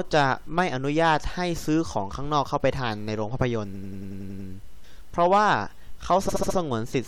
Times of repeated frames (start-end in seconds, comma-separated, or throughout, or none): 3.73-4.47, 6.28-6.56